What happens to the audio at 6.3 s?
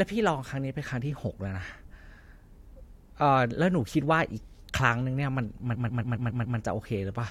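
Repeated frames, from 5.74 to 6.57 s: the same stretch of compressed audio, about 0.14 s long, plays six more times in a row, so the sound stutters and the clip runs about 0.84 s longer.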